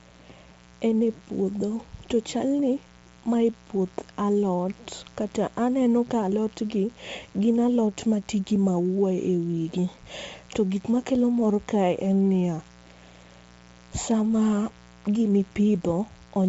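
Speech runs through the whole recording with two faults. A raspy mains buzz sits roughly 25 dB below the voice for the full length. Unlike a smooth hum, its spikes, twice in every 60 Hz cycle, carry harmonics well into the kilohertz range, because a dimmer, rectifier or poor shielding injects sharp switching edges. The voice also has a grainy, breathy edge, and nothing remains above 7.7 kHz. This is likely Bluetooth LC3 compression at a low rate, which fits roughly 32 kbps with 10 ms frames. A plain low-pass filter would sound clean, but here the codec discards the upper detail and fills it with noise.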